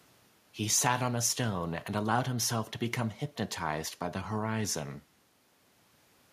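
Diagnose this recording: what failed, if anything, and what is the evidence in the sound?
Nothing failed in this recording.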